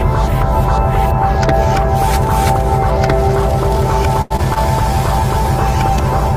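At 4.21 s the playback hits a short stall from a late packet, lasting to 4.32 s. The jitter buffer ran dry because a packet had not arrived on time, so the receiver held the last sound for about 89 ms until it showed up, then resumed from the same point. Nothing is dropped. The sound is simply drawn out, with a faint buzz or dip, and everything after it plays 89 ms later than before.

Two short concealed packet losses follow, at 4.36–4.40 s and 4.54–4.58 s, each with about 20 ms of audio that never reached the decoder in time. The receiver extrapolated from the preceding signal to cover the gap, about 19 ms in the first case and 16 ms in the second, then cross-faded back into the real stream. Each is heard as a brief smear or wobble, and a short transient falling in either window can be lost outright.

From 4.74 s to the end of the clip there is a call bitrate drop. The sender's bandwidth estimate fell and the encoder was throttled from 64 kbps to 19 kbps, where it stays for the remaining 1.6 s or so. 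With roughly a third of the bits, quantisation becomes coarse and the upper frequencies are trimmed, so the sound turns rough, watery and duller than the section before it.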